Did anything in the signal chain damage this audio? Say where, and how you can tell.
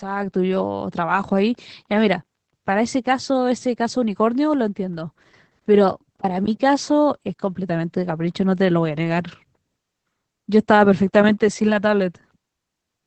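Yes, at the codec stage: Opus voice compression runs through the whole clip. The speech has no content above about 8 kHz, the wideband limit, and it sounds muffled, slightly hoarse and faintly robotic from start to finish. This points to Opus in its SILK linear-prediction mode at a low bitrate, around 12 kbps. SILK models the voice as a filter driven by an excitation signal, and at this rate the excitation is coded coarsely, which roughens the voice.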